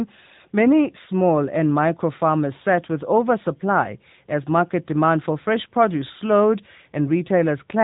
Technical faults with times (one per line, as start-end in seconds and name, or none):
0.00-7.83 AMR narrowband mobile codec